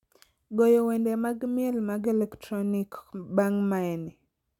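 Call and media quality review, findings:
No faults found in the speech recording. Nothing heard calls for a ticket entry.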